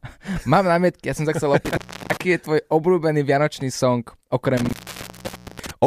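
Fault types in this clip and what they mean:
Intermittent contact: a loose cable or plug briefly opening, so the speech cuts out with crackly edges, once for 0.33 s and later for 0.9 s.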